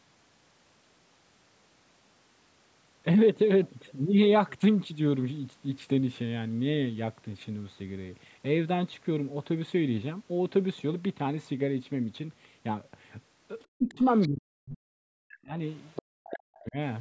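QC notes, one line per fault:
13.79–14.03 s, 14.28–15.55 s, 16.01–16.76 s: speech suppressed in double talk. The speech dips about 15 dB, then falls by about 40 dB, almost cutting out. The likely cause is the echo canceller turning down both sides while they overlapped.
14.21–14.28 s, 15.85–16.02 s: other side's voice leaking through. Short, faint scraps of a second voice sit about 15 to 20 dB under the speech. This is likely loudspeaker echo the canceller missed.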